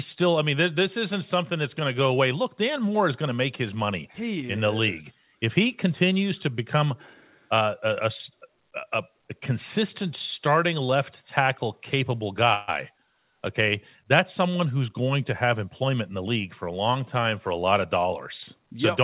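At 12.54 s the sound stretches into a brief fading buzz until 12.70 s, then resumes where it left off: a call audio freeze, likely from delayed packets draining the jitter buffer. From 15.44 to 17.00 s the speech runs about 8% faster at unchanged pitch. This is a jitter buffer speed-up, trimming around 150 ms of pitch periods to cut delay, over a call path band-limited below 4 kHz.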